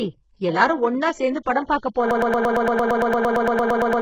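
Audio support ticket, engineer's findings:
HE-AAC compression, entire clip: gritty, lispy sibilants. Spectrogram shows a hard ceiling near 7.9 kHz, with treble copied up from lower bands and harmonics misaligned. Likely an HE-AAC encoder at a very low bitrate, around 8 kbps.

Broken-record loop, 2.11 s to end: one 114 ms fragment repeats back to back, about 17 times. Waveform shows identical tiled blocks. Likely a stalled player or stream resending its last fragment, so the audio from that point on is lost.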